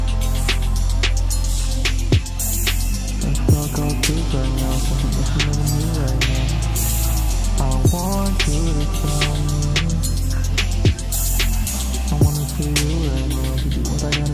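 No technical faults can be heard anywhere in this audio.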